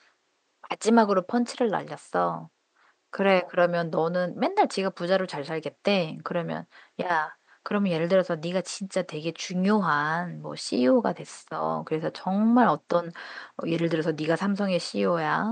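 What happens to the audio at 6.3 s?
Nothing goes wrong at 6.3 s, where the speech carries on intact over the faint room noise sitting about 47 dB beneath it.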